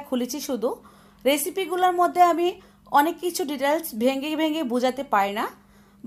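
No technical faults are audible.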